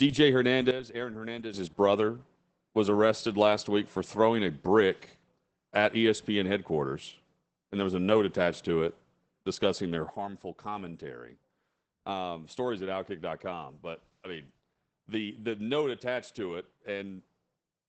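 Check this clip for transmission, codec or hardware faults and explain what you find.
Two kinds of fault are present: low-rate voice compression across the whole speech clip, and two abrupt level drops.

Opus voice compression runs throughout. The codec appears to be in its SILK linear-prediction mode at wideband, which fits a bitrate around 12 kbps with 20 ms frames. The excitation is coded coarsely, so the damage is plainly audible: the voice sounds muffled, hoarse and slightly robotic.

A sudden gain jump occurs at 0.71 s, when the level falls by about 10 dB with no ramp, then snaps back at 1.54 s. Speech and background noise drop together, most likely because a gain setting was applied in a single sample step.

A second sudden gain jump comes at 10.10 s, when the level drops by about 9 dB and stays down to the end. Voice and noise floor fall in step, again likely from digital gain changed instantly rather than faded.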